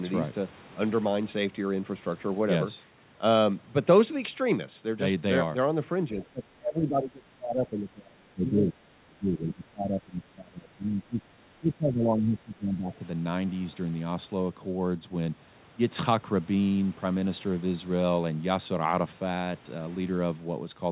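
It's a speech clip, and from 6.12 to 11.21 s and again 11.6 to 12.92 s the talker gets speech suppressed in double talk, dipping by as much as about 25 dB, likely the echo canceller ducking everything while both ends spoke. Right after, from 12.94 to 13.08 s, a faint scrap of the other side's voice leaks through, about 35 dB under the speech, likely residual loudspeaker echo the canceller missed.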